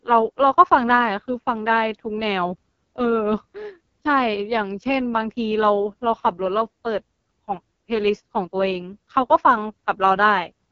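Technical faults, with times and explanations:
Throughout, AMR wideband (HD Voice) codec: heavy rasp as the pulse-driven model starves in the 6.6 kbit/s mode, nothing above 7 kHz.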